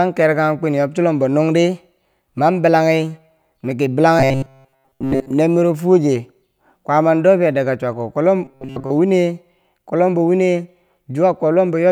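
From 4.19 to 5.31 s, and again from 8.45 to 8.90 s just before "wine kwob lombo wini", the speech turns into a robotic sound from repeated short buffers. A rigid metallic buzz near 134 Hz comes in. Likely the last 7.5 ms of audio was looped while most incoming audio was skipped.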